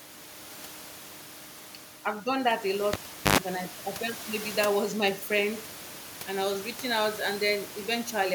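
Right after "I've done that a", at 2.93 s, there's a classic cable pulled and plugged in: a pop, about 0.4 s of near silence, then roughly 0.1 s of 50 Hz mains buzz as the tip touches, and another pop at 3.38 s.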